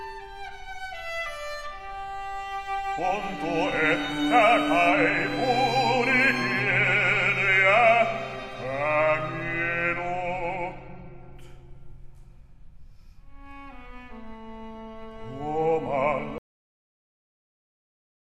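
At 16.38 s a cut-off end strikes: the final buffers never played, so sound halts mid-event into digital silence, abrupt with no decay, unlike a fade-out.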